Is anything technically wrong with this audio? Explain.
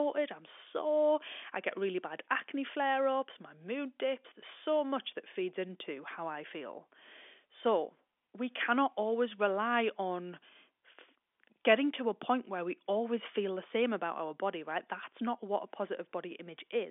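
No, nothing here sounds technically wrong.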